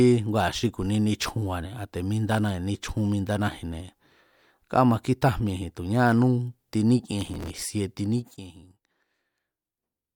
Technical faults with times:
7.18-7.62 processor overload crackle
8.06-8.54 zipper noise

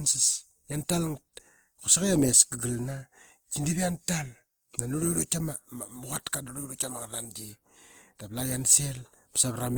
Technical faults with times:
0.00-9.78 Opus compression

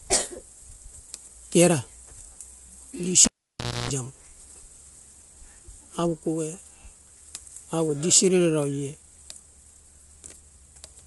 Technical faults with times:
0.00-11.07 low-delay AAC compression
3.25-3.90 cable pulled and plugged in

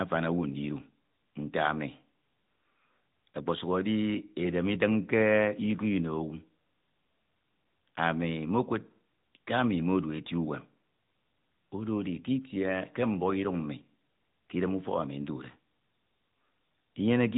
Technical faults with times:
0.00-17.37 AMR narrowband mobile codec

